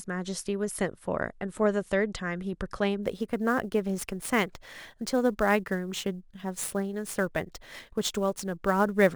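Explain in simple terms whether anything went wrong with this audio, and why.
Sample clock jitter begins at 3.03 s and lasts to the end of the speech. The converter's timing clock wobbled by around ten millionths of a second, so each sample was taken slightly early or late. That adds a gritty hiss that grows on louder, sharper sounds.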